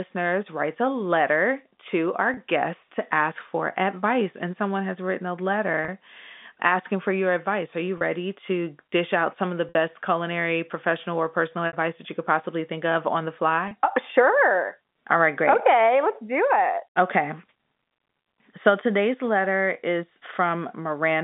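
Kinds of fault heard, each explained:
Packet loss with pitch repetition: Chunks of audio were lost in transit, and the receiver filled each gap by repeating the last pitch period. Gaps fall at 2.34, 5.85, 7.98, 9.69, 11.67 and 13.68 s. Four last 30 ms, which fits one lost packet each, and sound like a brief buzzy hold. Those at 9.69 and 11.67 s last 60 ms, the second just before "that you could possibly", and the held tone begins fading away before the sound returns.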